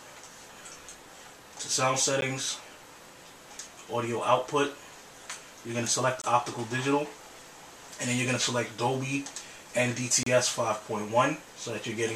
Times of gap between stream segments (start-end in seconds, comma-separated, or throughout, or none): 2.21, 6.22-6.24, 10.23-10.26